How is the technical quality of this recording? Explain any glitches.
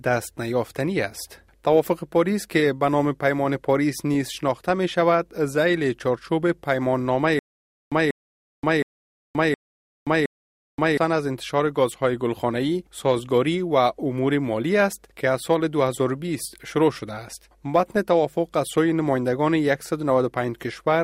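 The recording has one clear glitch, a stutter with silent gaps running from 7.39 s to 10.97 s. In that stretch, a fragment of about 190 ms plays, then about 526 ms of dead digital silence follows, and the cycle repeats five times at a steady 717 ms period. The likely cause is a stalled player or stream that replayed its last buffered chunk on each retry before running dry, so the audio belonging to that window never plays.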